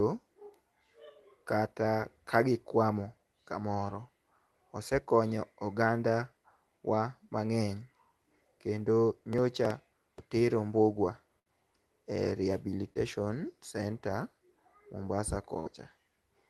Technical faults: processor overload crackle; burst of packet loss; short concealed packet loss

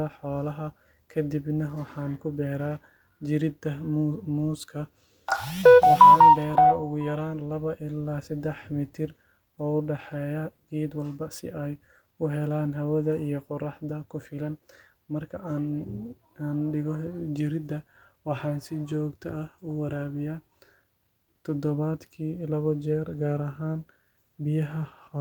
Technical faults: none

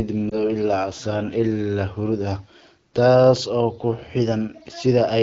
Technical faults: lost AMR speech frames

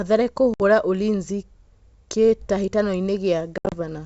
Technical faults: packet loss on an ADPCM call

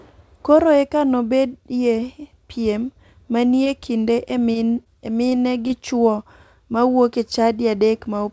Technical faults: short concealed packet loss

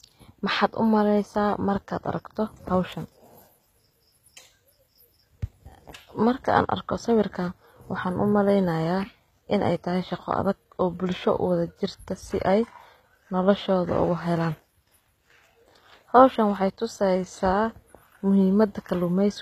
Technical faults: HE-AAC compression

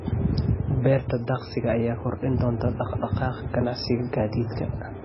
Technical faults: MP3 compression

